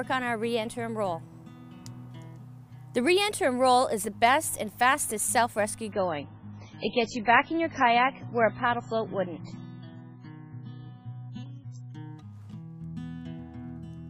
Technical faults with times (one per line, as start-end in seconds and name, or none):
5.92-11.92 adaptive stream at a lower bitrate